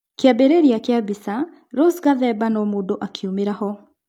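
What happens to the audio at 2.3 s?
Nothing goes wrong at 2.3 s; the speech plays through that moment intact, with no dropout, click or distortion to be heard.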